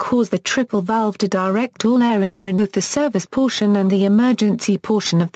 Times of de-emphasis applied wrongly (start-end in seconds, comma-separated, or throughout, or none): none